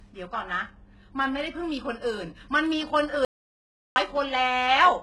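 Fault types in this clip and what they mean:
HE-AAC compression: The treble sounds rebuilt rather than real, with s sounds going gritty and metallic where the copied-up bands don't line up with the true harmonics, and nothing above 11.5 kHz. That's likely heavy HE-AAC coding at a bitrate around 12 kbps.
audio dropout to silence: From 3.25 to 3.96 s the speech cuts to silence for about 0.71 s, with no room tone underneath, then comes back mid-flow. The input most likely dropped while the recorder kept writing silence, so that stretch is gone.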